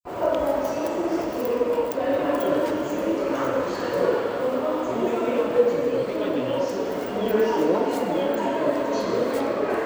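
No technical faults are audible anywhere in the recording.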